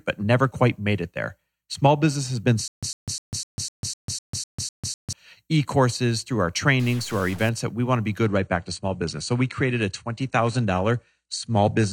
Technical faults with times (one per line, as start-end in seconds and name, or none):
2.68-5.13 stutter with silent gaps
6.80-7.49 stuck bit
8.25-11.92 adaptive stream at a lower bitrate